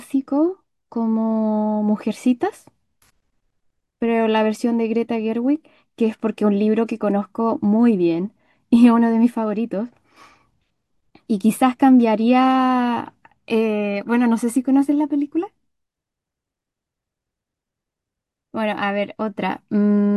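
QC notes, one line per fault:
No technical faults are heard anywhere in this speech recording.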